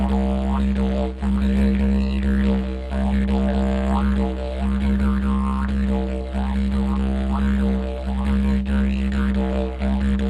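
Clock drift between sender and receiver runs throughout: the sender's clock is around 5 percent fast, so the receiver's jitter buffer keeps filling. From 0.58 s to 10.04 s, repeated timing corrections cut short pieces, unevenly spaced, to hold a 105 percent rate, heard as small recurring hiccups.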